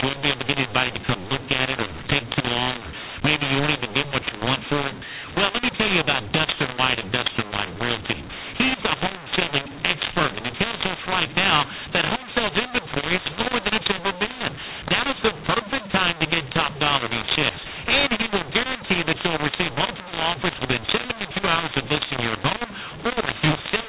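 Throughout the clip, telephone audio coded with G.711 mu-law is being decoded as A-law, a mu-law and A-law mix-up. Each 8-bit code maps to the wrong level, scrambling loudness: the speech turns harsh and distorted, and pauses fill with noise instead of silence.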